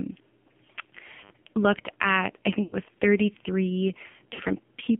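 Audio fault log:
throughout AMR narrowband mobile codec: a low-bit mode, which fits about 5.9 kbps, rebuilds speech from a few pulses, so it sounds buzzy and synthetic, confined to 150 Hz–3.4 kHz.
2.64–2.77 s, 4.34–4.40 s lost AMR speech frames: the decoder patched corrupted frames by repeating the last pitch and vocal tract settings at falling gain, so speech smears and dips for about 80 ms, then 40 ms.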